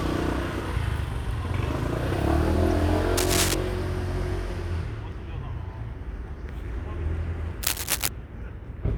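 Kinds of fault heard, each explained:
Corrupt frame decoded: Bits inside compressed data were damaged in transit or storage, and the decoder played the faulty frames rather than concealing them, so spectral energy landed in the wrong places. At 2.70 s this gives a single brief glitch, roughly two frames' worth of misplaced content peaking at around -20 dBFS.
Cable scratch noise: A worn cable, connector or control was likely being disturbed, its contact resistance fluctuating rapidly and injecting irregular bursts of noise into the signal. This is heard twice, from 3.17 to 3.55 s and from 7.63 to 8.08 s, as a dense, uneven scratching and rustling roughly as loud as the sound itself. Each episode lasts under half a second.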